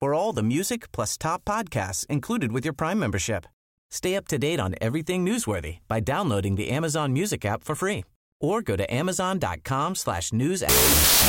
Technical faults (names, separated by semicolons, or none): wrong sample width